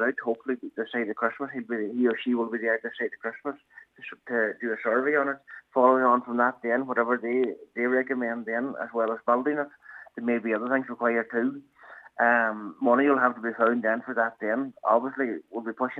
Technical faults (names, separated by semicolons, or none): none